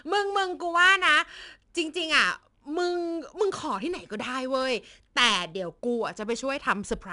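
Speech runs through 4-bit ADPCM compression for its whole length. Each sample is coded as a coarse 4-bit step from a predicted value, so a plainly audible gritty hiss rides on the louder syllables and sinks when the level drops. Because this noise follows the signal, it differs from steady background hiss and lacks the swirling, warbling quality of transform codecs. Nothing above 10.7 kHz survives, and the dulled top fits a data rate of about 89 kbps.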